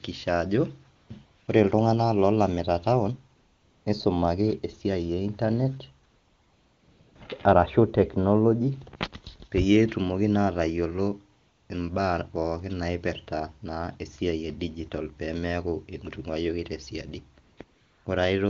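AMR comfort noise at 0.95–1.09, 1.25–1.47, 3.35–3.85, 6.07–7.15 (after "e internet"), 11.39–11.69, 17.43–17.57 and 17.63–18.05 s: speech frames stopped, and smooth synthetic noise replaces the real background in each gap.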